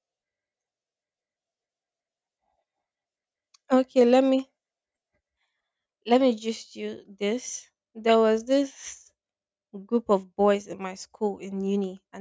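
No technical faults can be heard anywhere in this speech recording.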